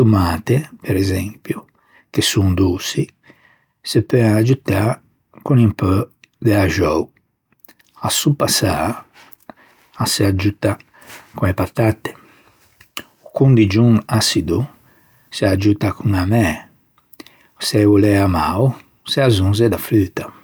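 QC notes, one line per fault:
No faults found in this clip.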